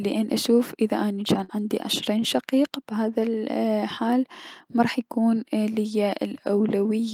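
A speech clip with one burst of packet loss from 1.44 to 1.51 s, just before "عندي عشرين". The receiver stretches the last sound for about 47 ms, fading it as a held buzz or hiss. Speech then resumes with about 40 ms skipped.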